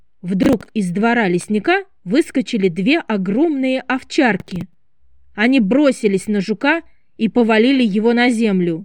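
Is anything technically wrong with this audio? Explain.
Yes. Processor overload crackle occurs at 0.43–0.69 s and 4.4–4.74 s: repeated missed deadlines on roughly 10 ms buffers replay stale audio, giving gritty bursts rather than a single clean dropout.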